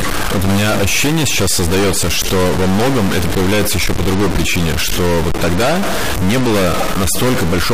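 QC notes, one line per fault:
Throughout: stuck bit. The whole clip carries a distortion riding on the speech, and the pauses are filled with a steady hiss instead of falling silent. The likely cause is one data bit held at a fixed value by a faulty line or converter, so roughly half the samples are pushed off by that bit's weight. Even tiny signals near zero flip that bit, which is why the gaps never go quiet.
2.22–2.25 s and 6.80 s: corrupt frame decoded. Each is a short blip or chirp. The first lasts about 30 ms and peaks at about −10 dBFS, and the second is a shorter one, about 16 ms, peaking at about −5 dBFS. In each case a single compressed frame arrived with flipped bits and the decoder played it regardless. Misread gains and codes scattered energy into the wrong frequencies for that frame's span, which is why each blip sounds unrelated to the surrounding speech.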